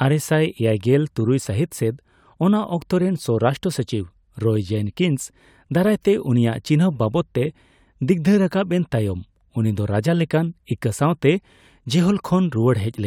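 No faults are audible anywhere in the recording.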